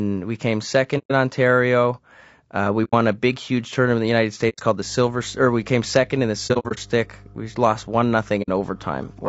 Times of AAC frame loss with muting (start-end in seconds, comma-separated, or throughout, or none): 0.98-1.11, 2.84-2.94, 4.49-4.60, 6.47-6.79, 8.42-8.49